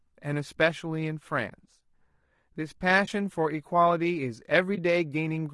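Low-delay AAC compression runs through this speech clip from start to finish: the voice sounds rough and grainy, with a hiss filling the gaps between the pitch harmonics and a top band that feels thin and synthetic. The likely cause is an AAC-ELD encoder at a low rate, around 32 kbps. Its short frames separate the harmonics poorly and leave few bits for the highs. AAC frame loss with muting appears at 1.49 to 1.52 s, 3.05 to 3.08 s and 4.75 to 4.79 s. Each is a brief hole of about 20 ms, which fits a single dropped frame. The decoder zeroed the missing spectrum, and the overlapping windows fade the sound out and back in, so each gap has soft edges.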